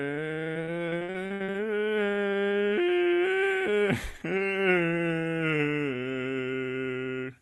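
From 0.53 to 1.56 s the music breaks up with repeated packet loss (robotic sound): ten short dropouts, the longest 58 ms, each patched by stretching the previous sound, so about a third of that stretch is concealed and turns choppy. Throughout, the top end stops near 12 kHz, which fits a call codec such as Opus at about 32 kbps.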